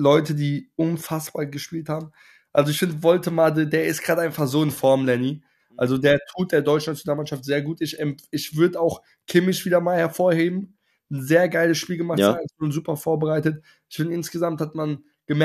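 Listening closely, nothing in the audio stood out as a problem at any point.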